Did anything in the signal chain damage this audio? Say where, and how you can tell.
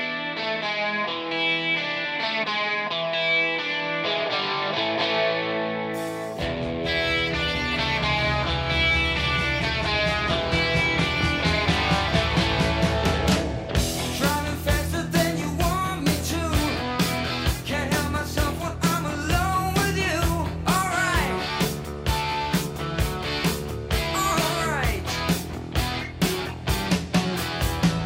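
No, nothing along the chain has left a mark I can hear on this audio, so there's no stage to point to here.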